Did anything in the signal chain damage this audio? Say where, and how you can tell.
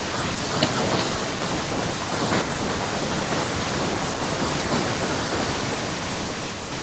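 Yes. There is echo with no canceller, present throughout the speech. Every phrase is followed, roughly 0.4 s later, by a thinner copy sitting about 9 dB below it. That points to the far end's call processing: its loudspeaker playback was picked up by its microphone and sent back across the network unremoved. The echo keeps the same roughly 0.4 s lag, so it is the call's round-trip delay. The 8 kHz top end is the call codec's normal bandwidth.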